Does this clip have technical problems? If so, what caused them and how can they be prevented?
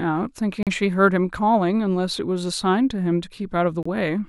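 Yes. Corrupt frames were decoded at 0.63–0.68 s and 3.83–3.87 s. Each time, damaged compressed data spanning a couple of frames was played anyway, putting energy at the wrong frequencies as a short blip. The second blip is quieter. Prevent this with checksums on each frame and concealment of bad frames instead of decoding them.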